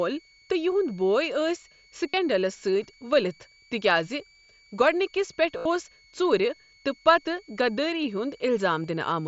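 A thin, steady whistle sits under the speech for the whole clip, hovering between about 2.2 and 2.3 kHz, roughly 35 dB below the voice, with a pitch that wanders within that band. This is a switching supply whistle: a nearby power converter is cycling at an audible rate, and as its load shifts the switching frequency drifts, so the tone slides instead of holding one pitch.

At 2.09 s the speech briefly turns into a buzzy, level-held tone for about 45 ms, with a small warble as normal sound resumes at 2.14 s. A longer, more obvious buzz of about 75 ms runs from 5.58 to 5.65 s, and a single short blip at 8.83 s is almost hidden. This is concealed Bluetooth headset packet loss: audio packets from the headset went missing, and the receiver filled each gap by repeating the best-matching slice of the preceding audio, which sounds smooth for one lost packet but turns into a droning tone over longer runs. 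The light graininess of the mSBC link, limited to 8 kHz, is separate from these gaps.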